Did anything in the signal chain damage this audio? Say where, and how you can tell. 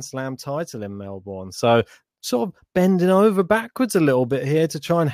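Yes. At 1.58 s the speech steps up by about 6 dB in a single sample and stays at that level through to the end, a sudden gain jump. The background noise floor rises by the same amount at the same instant, so the change happened to the whole signal in the digital domain. The speaker did not get louder. A 6 dB step is almost exactly a doubling of amplitude, so the likely cause is a one-bit shift or a gain setting applied without a ramp in a sample-format conversion or driver gain stage. On the waveform the envelope abruptly doubles in height at 1.58 s. On a spectrogram every frequency band, including the quiet gaps between phrases, brightens together along a sharp vertical boundary.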